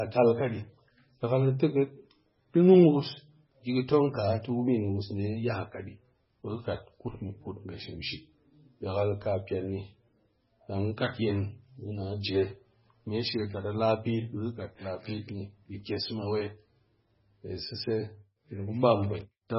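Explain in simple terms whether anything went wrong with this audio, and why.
Yes, something went wrong, and it lasts the whole clip. The speech sounds dull and watery, as if heard through a thin pipe, with a swirly, metallic edge on s sounds and smeared word onsets. Nothing is left above about 5.6 kHz, so the crisp top end is gone. The likely cause is heavy MP3 compression: with too few bits available, the encoder cut off the treble and kept dropping faint detail that flickers in and out from moment to moment.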